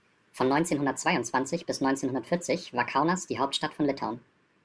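Wrong sample rate, present from start to finish: the speech runs about 1.38 times too fast and sits about 5.55 semitones too high, with pitch and tempo shifted together by the same ratio. That pairing shows the samples were played back faster than they were captured, with no rate conversion, which fits 16 kHz audio played at 22 kHz. Voices come across as squeaky, rushed and chipmunk-like, with compressed syllables and raised formants.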